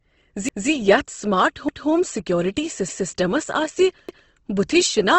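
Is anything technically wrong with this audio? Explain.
Yes, there are two problems. Throughout the speech there is a rough, grainy coarseness and nothing above about 8.2 kHz. This is likely Opus compression at a low bitrate, around 16 kbps, in its transform (music-style) mode. That mode keeps each band's energy but fills starved bands with folded or noisy content, so tones turn gritty rather than swirling. The absence of watery, bubbling holes is what separates it from MP3 damage.

Overlapping chunks occur at 0.49, 1.69, 2.89 and 4.09 s, where a 200 ms stretch of sound plays twice before moving on. The audio was handled in 1 s chunks, and each new chunk began 200 ms before the previous one ended, so every join repeats that slice as a stutter or click. Dropped chunks would leave gaps instead. Here the repeats fall on a fixed 1.2 s rhythm and are the same length each time.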